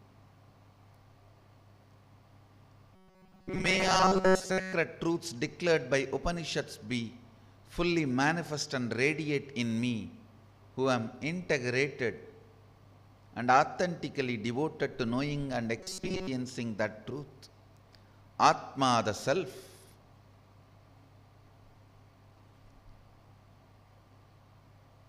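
Robotic sound from repeated short buffers at 2.95–4.73 s and 15.81–16.28 s: a rigid 188 Hz buzz, likely from roughly 5 ms chunks looping while most new audio gets skipped.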